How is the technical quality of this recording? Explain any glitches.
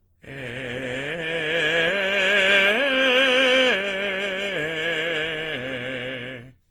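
The technical quality is compromised by one fault. Generation loss runs throughout the music: sound is swirly, hollow and smeared, with blurred attacks, likely from roughly ten Opus re-encodes near 48 kbit/s.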